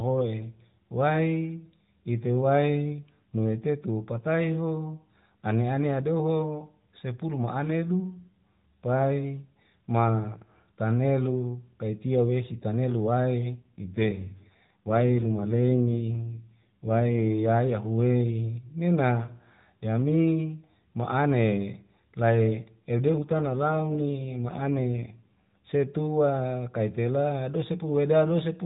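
From 13.56 to 17.29 s, and again from 23.10 to 25.61 s, the speech turns rougher and more buzzy, which is the sound of an AMR rate drop. The codec is forced to a lower rate to protect the bits, which fits a step from 12.2 to about 5.9 kbps. Unlike a dropout or a narrowing of the band, there is no gap and the bandwidth stays the same. The voice just sounds more synthetic until the rate returns.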